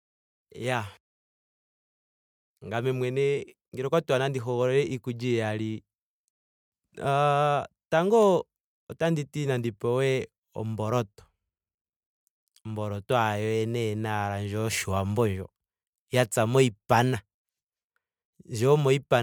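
Generation loss runs through the whole speech clip: it sounds swirly, hollow and smeared, with blurred attacks, and nothing sits above 20 kHz. This likely comes from MP3 encoding repeated about three times, each pass near 116 to 119 kbit/s requantising on a shifted frame grid.

CD scratch ticks appear from 8.23 to 9.03 s, just before "ti nandi pewe omboloto": four brief ticks, each well under a millisecond. Once per disc revolution, damaged data exceeded error correction, so the player patched over the lost samples.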